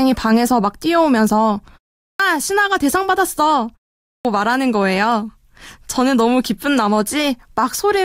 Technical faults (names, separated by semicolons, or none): clipped start after a pause